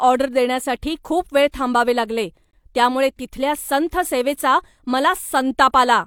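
The clip is speech with a gap between stream segments. From 2.51 to 2.53 s the sound drops out into silence for about 21 ms. The edges of the hole are abrupt, so it is heard as a hard cut. The cause is a timing mismatch at a segment boundary. One segment ends slightly before the next begins, and the player fills the space with silence. Nothing is lost. The position fits 2-second segments.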